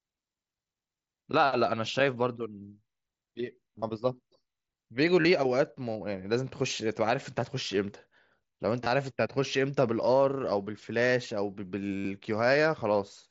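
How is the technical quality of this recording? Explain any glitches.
The speech, heard through the mSBC headset codec's 8 kHz bandwidth, has four brief glitches: short buzzy, held-level tones that end in a slight warble as the speech resumes. They fall at 3.75–3.82 s, 5.21–5.25 s, 8.84–8.86 s and 11.97–12.05 s. This is concealed Bluetooth headset packet loss: packets were lost between headset and phone, and the receiver filled each gap by repeating recent waveform.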